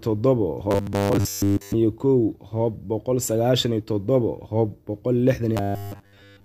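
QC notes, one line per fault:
0.71–1.74 s and 5.57–6.44 s: robotic sound from repeated short buffers. The sound becomes a rigid metallic buzz locked at 100 Hz, which fits a 10 ms block being replayed over and over, likely because fresh audio arrived too seldom. Most of the real material in these spans is skipped. Unlike dropouts, there are no silent gaps, and unlike a stutter, the buzz holds one fixed pitch while the sound's rough contour still comes through.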